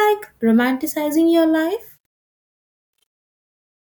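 From 1.6 s, just after "romanticizing your", the fade-out has truncation distortion: a fade stage keeping only 9 bits, undithered, squares the waveform into steps. From 2.25 s to the end it turns gritty, with broadband speckle on a spectrogram.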